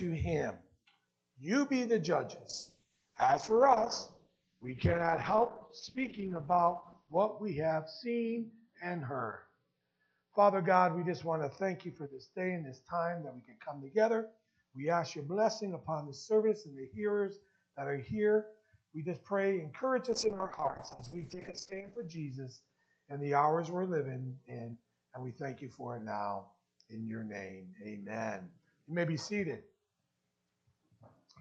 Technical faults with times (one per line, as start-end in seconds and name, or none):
2.51-17.47 call bitrate drop
20.12-24.45 call bitrate drop